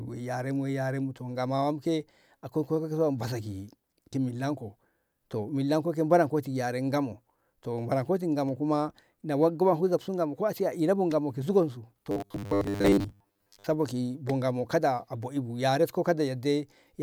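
From 12.11 to 13.66 s the speech turns into a rigid, metallic drone with a fixed 100 Hz buzz, which is robotic sound from repeated short buffers. The likely cause is audio arriving too seldom, so a stretch of about 10 ms is replayed over and over while most of the real signal is skipped. Unlike codec warble, the buzz stays at one steady rate instead of smearing, and it follows the original speech only roughly.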